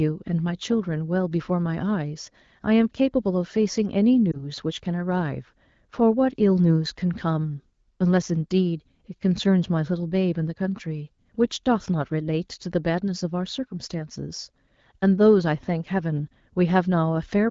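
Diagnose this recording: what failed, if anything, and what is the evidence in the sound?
A brief dip and warble in the speech from 4.31 to 4.45 s, which fits a single lost 20 ms frame. These are lost AMR speech frames, a network fault: a radio error corrupted the frame, and the AMR-WB decoder, running at 12.65 kbit/s, filled the gap by repeating the previous pitch and vocal tract settings at reduced gain.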